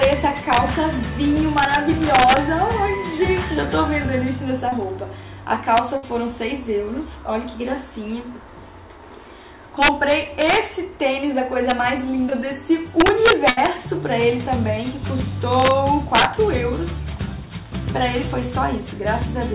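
Integer overflow runs through the whole clip. The signal is driven about 5 dB past full scale, and instead of being limited, the loudest peaks wrap to the opposite sign. A small fraction of samples flip this way, producing harsh, violent cracks on loud moments that are sharper than ordinary clipping.

Short concealed packet loss occurs at 4.69–4.73 s (30 ms), 10.24 s (10 ms) and 12.30–12.33 s (20 ms). Audio failed to arrive in time, so the decoder extended the preceding sound and blended back. Each is a brief smear or wobble.

A burst of packet loss hits at 5.97–6.04 s (60 ms) and 13.50–13.58 s (70 ms). The receiver continued the last sound while fading it down, giving a held buzz or decaying hiss, and then resumes with that stretch missing. All of this sits within a band ending at 4 kHz, which points to a narrowband telephone codec.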